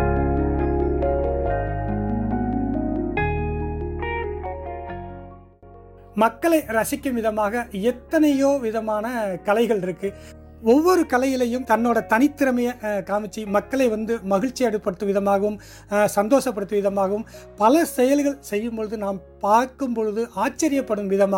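No technical faults can be heard anywhere in the recording; the signal holds steady throughout, with no interruptions, distortion or other defects.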